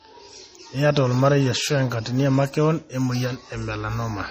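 Throughout, the speech has a hard ceiling near 15.2 kHz with swirly low-bitrate smearing, likely low-bitrate audio saved at a high bitrate, so the big file still carries the old damage.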